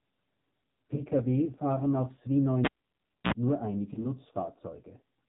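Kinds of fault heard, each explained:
AMR narrowband mobile codec: The speech is squeezed into a telephone band with nothing above 4 kHz, and heavy coding damage leaves it buzzy and synthetic, which fits a low AMR-NB mode near 5.9 kbps. Unlike plain low-pass filtering, the voice itself sounds modelled rather than just muffled.
Lost AMR speech frames: Around 0.96 to 1.03 s and again at 3.94 to 4.07 s, the sound briefly dips and warbles as the decoder reuses its last pitch and vocal tract settings, consistent with a single lost 20 ms frame each time. Unlike a dropout, there is no hard gap or click.
Cable pulled and plugged in: From 2.65 to 3.32 s a pop cuts the sound to near silence for about 0.63 s, then a 56 ms burst of 60 Hz mains buzz comes before a second pop brings the sound back. The buzz and paired pops set it apart from frame loss.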